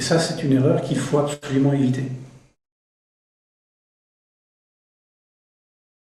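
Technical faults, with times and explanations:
1.33 to 1.45 s, short stall from a late packet: a packet arrived late and the jitter buffer ran empty, so the receiver stretched the last sound for 89 ms, then carried on. Nothing is lost, but the sound hangs briefly and what follows runs 89 ms late.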